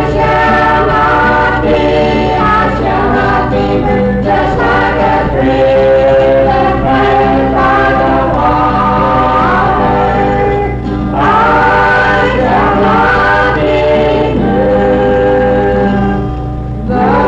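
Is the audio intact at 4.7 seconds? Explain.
Yes, at 4.7 seconds the audio plays through cleanly, with no dropout, click, distortion or other fault to be heard.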